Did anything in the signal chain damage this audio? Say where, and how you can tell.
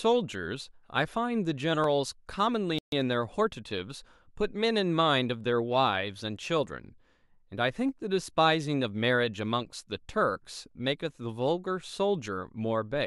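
Yes. At 1.84 s there is a single sharp click, a thin vertical line across the spectrum. This is dropped samples, likely at the driver or buffer stage. A fraction of a millisecond of the stream went missing, so the waveform jumps to a later value.

From 2.79 to 2.92 s the speech cuts to silence for 138 ms, then continues. This is a playback stall, likely the player running out of data or its thread being blocked, so output halted until it recovered.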